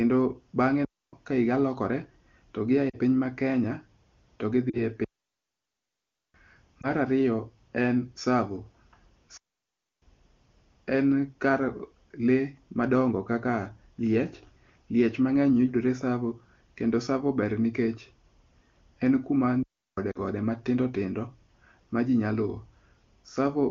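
At 0.85 to 1.13 s, a digital wireless dropout mutes the speech for about 0.28 s before "ka higa lokore to". The link lost too much data, so the receiver cut to near silence with no noise burst. Lost AMR speech frames follow at 2.89 to 2.97 s, after "higa lokore to gi". Frames failed their checksum, and the decoder briefly stretched the last good sound. The result is a roughly 40 ms fade toward near silence, consistent with two missing frames. A similar fade occurs at 4.69 to 4.83 s. A second dropout leaves a long, clean gap from 5.04 to 6.34 s, 1.3 s. At 6.81 to 6.87 s, a single lost frame of about 20 ms adds a quick dip before "ariyo en". Further dropouts fall at 9.37 to 10.02 s, about 0.65 s, and at 19.63 to 19.98 s, about 0.35 s. A last two-frame fade sits at 20.11 to 20.18 s. Between the holes, the AMR wideband (HD Voice) codec at 23.85 kbit/s adds little audible damage.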